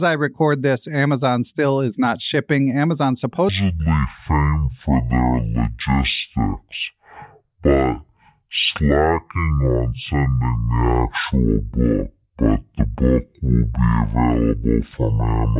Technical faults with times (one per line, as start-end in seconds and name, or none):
3.49-15.59 wrong sample rate